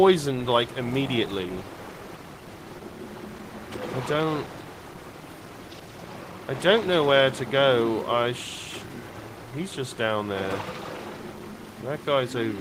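At 5.41 s the audio jumps forward with no gap, a clear skip ahead: around a fifth of a second just vanishes and the two sides butt straight together, the sort of thing you get when a backed-up jitter buffer throws away a stretch to catch up. Right after, from 5.50 to 6.41 s, there's a jitter buffer speed-up. The receiver is trimming tiny pitch-period chunks over and over, about 70 ms in all, so things run roughly 8% fast without the pitch shifting, and it feels a bit rushed.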